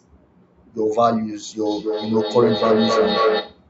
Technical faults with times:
1.65-3.66 feedback howl

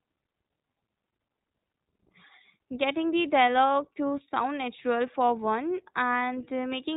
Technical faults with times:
0.00-6.96 iLBC codec

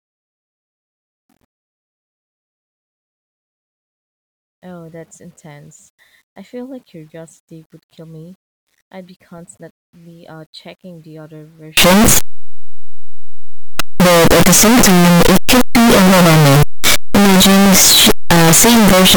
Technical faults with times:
11.77-19.16 signed and unsigned mixed up

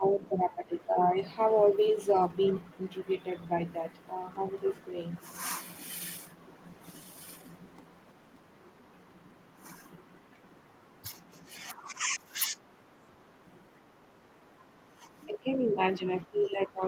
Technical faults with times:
0.00-0.97 speech suppressed in double talk
4.48-4.52 other side's voice leaking through
7.13-7.45 speech suppressed in double talk
11.14-12.60 speech suppressed in double talk
13.11-13.17 speech suppressed in double talk
14.62-16.87 speech suppressed in double talk

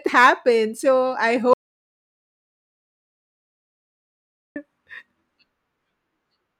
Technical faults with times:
1.53-4.56 audio dropout to silence

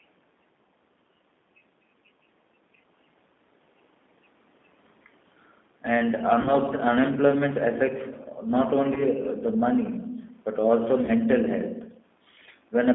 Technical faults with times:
0.00-12.95 G.729 codec
6.42-6.54 VoIP packet loss concealed by the speech codec
8.94-9.07 VoIP packet loss concealed by the speech codec
11.06-11.11 VoIP packet loss concealed by the speech codec

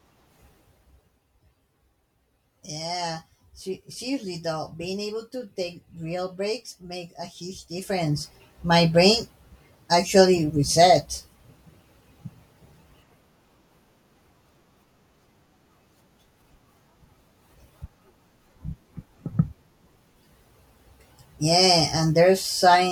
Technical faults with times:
7.71-8.35 zipper noise

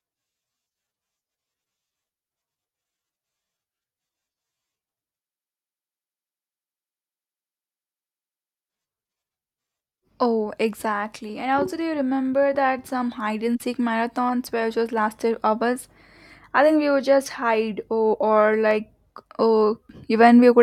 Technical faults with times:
17.31 dropped samples
18.71 dropped samples

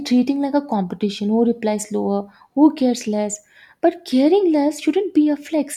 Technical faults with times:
none

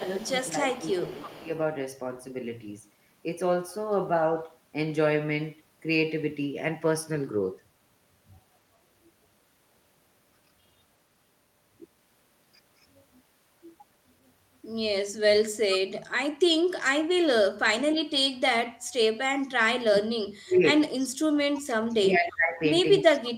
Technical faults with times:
0.00-1.49 speech suppressed in double talk
0.00-1.50 echo leak
19.49-20.83 speech suppressed in double talk
20.99-21.06 echo leak
21.65-23.36 speech suppressed in double talk
23.14-23.31 echo leak

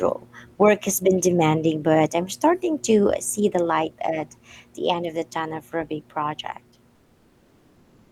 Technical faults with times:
6.97-8.11 comfort noise in place of the background

